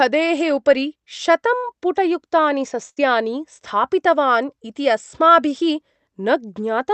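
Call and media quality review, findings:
Burst of packet loss, 1.57–1.66 s: concealment fill fading over about 58 ms, then audio resumes about 60 ms further on. Jitter buffer concealment extending last frame across lost packets.
Same, 2.89–3.01 s: longer fill, about 73 ms, roughly 60 ms skipped. Unlike a plain dropout, the gap is filled by decaying continuation rather than silence, and the following sound jumps ahead instead of picking up where it stopped. Call codec band limit near 8 kHz throughout.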